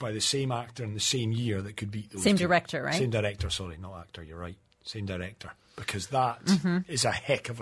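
No technical faults are audible.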